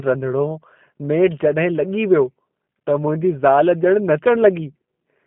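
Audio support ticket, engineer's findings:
G.729 codec damage across the whole speech clip. Band-limited, roughly 150 Hz to 3.4 kHz; nothing above 3.8 kHz. Rough, synthetic texture, plainly audible. Probable component: G.729A encoder on the call path, consistent with an 8 kbit/s codec. Mechanism: speech rebuilt from a vocal tract filter, pitch predictor and sparse pulses per 10 ms frame.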